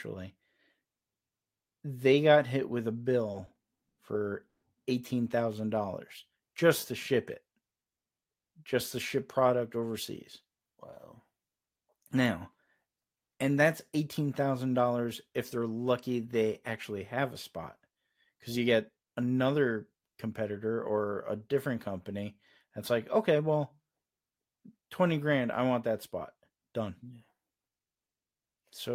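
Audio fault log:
3.31 to 4.65 s, repeated stalls (stutter): Right after "got hit with a", the speech halts six times. The receiver ran out of audio each time. It bridged each gap by stretching the last sound, for 300 ms in all. The longest hold lasts 130 ms. About a quarter of the span is this filler. Nothing is lost. The speech drags and catches instead, because packets came in late.
19.92 to 20.50 s, 23.15 to 23.82 s, 26.34 to 27.42 s, jitter buffer speed-up: The first run falls between "cuz you get another" and "or a different company". The third follows "I want that spot". Speech runs at 109%, 108% and 109% speed. The pitch stays the same. The receiver had too much audio queued. It trimmed tiny pitch-period slices, about 70 ms, 70 ms and 100 ms in total. The delivery sounds briefly hurried.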